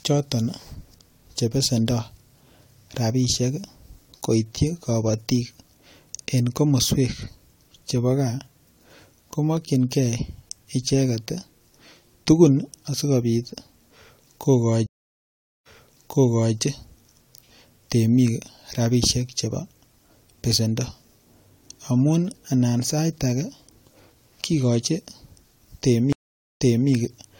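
Speech with two stream reconnect dropouts: at 14.86 to 16.56 s it goes silent for 790 ms, then picks up 0.91 s earlier, and at 26.13 to 26.90 s a 472 ms gap rewinds 0.3 s. The connection dropped, and the server resent a burst to a fresh decoder.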